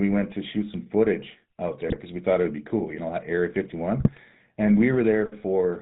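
From start to finish the speech carries the buzzy, gravelly roughness of the GSM full-rate codec, consistent with the 13 kbps full-rate coder. It models the vocal tract as a filter and excites it with regularly spaced pulses, discarding two of every three excitation samples, so voiced sounds turn coarse and rasping. On a spectrogram the energy stops abruptly at 4 kHz, with smeared, grainy harmonics below that line.

Between 1.88 and 1.97 s come GSM bit errors: corrupted bits reach the decoder and scramble its filter, pitch and gain values for a brief run of frames. The speech breaks into a short squawk and gargle. A longer burst from 4.00 to 4.20 s does the same over more frames. On a waveform both show as sudden level spikes or dropouts, and on a spectrogram as blotchy, misplaced energy bands that clash with the surrounding formants.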